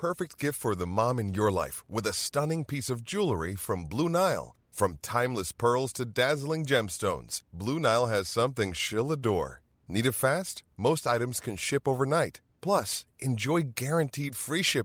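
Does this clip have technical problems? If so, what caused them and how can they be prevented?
No, this clip has no technical problems, so there is nothing to trace to a cause or prevent.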